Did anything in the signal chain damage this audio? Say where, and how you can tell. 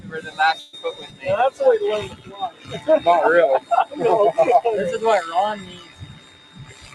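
Yes. A noise suppressor applied to music or sounds runs through the whole clip, in the call-processing stage. A speech-tuned suppressor is treating sustained, non-speech material as background noise, so held tones, ambience and decays are pulled down while sharp onsets pass. The gain swings over a range of around 20 dB, and the sound pumps and thins instead of holding a steady level.

A burst of packet loss hits from 0.59 to 0.75 s, at the network stage. About 140 ms of audio never arrived in time. For roughly 134 ms the receiver stretched out the last received sound, fading it as the gap went on, so a smeared, decaying fill stands in for the real material. Playback then jumps ahead, and the section that fell in the gap is simply absent.

Sound cut by the noise suppressor appears at 0.94–1.23 s (about 300 ms), 2.12–2.71 s (about half a second) and from 5.64 s to the end. These come from the same call-processing suppressor: it judged these passages to be noise and attenuated them harder than their surroundings, by about 11 dB in the first two spans and about 12 dB in the last. 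Sustained content sinks and its tails are cut short.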